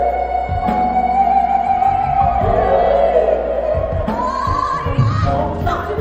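From 4.01 s to the end, the pace abruptly jumps to about 1.49 times normal while pitch holds, sounding rushed; likely a time-stretched section squeezed by dropping short pieces.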